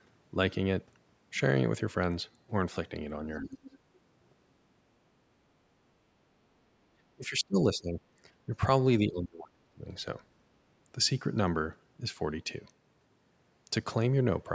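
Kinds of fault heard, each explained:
Other side's voice leaking through: A faint second voice slips in as short scraps at 3.35–3.47 s, 3.66–3.78 s and 3.95–3.99 s, each sitting well below the main talker: about 20 dB down at first, then about 25 dB, then a barely audible trace about 40 dB down. This is likely residual echo: the far party's audio, played from the talker's loudspeaker, reached the microphone and was not fully cancelled.
Speech suppressed in double talk: The talker's speech drops away in three stretches, at 3.4–3.73 s, 7.15–8.01 s and 9.07–9.9 s. The first dip is around 20 dB deep. The later two sink by around 30 dB and are affected for most of their length. The likely cause is the echo canceller meeting both sides speaking at once, failing to tell the local voice from the loudspeaker echo, and attenuating everything together.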